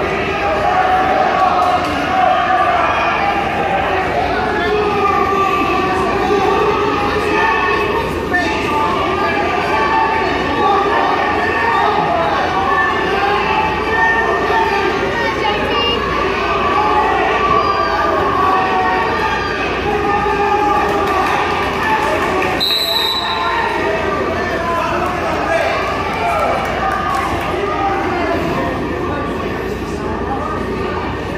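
Nothing stood out as a technical fault on listening.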